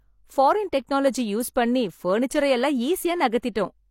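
A transform codec has spread its quantisation noise across a whole coding block, and at 1.54 s a sharp attack landing late in that block drags noise sized for the loud part into the quiet moment just before it. The result is pre-echo: a brief hiss of about 17 ms runs ahead of the onset leading into "பண்ணி பர்னிச்சரை எல்லாம்", and the attack itself loses its crispness, sounding softened and smeared.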